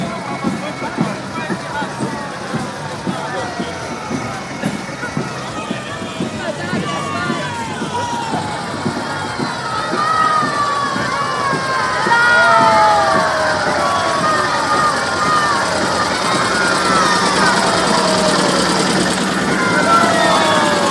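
Right through the clip there's a 50 Hz buzz riding on the sound. The resampler was restarted on every block, so each 20 ms block was converted with no view of its neighbours, which fits a 48 kHz to 24 kHz conversion. Every block edge picks up a small error, and those errors tick at 50 per second whenever there's signal.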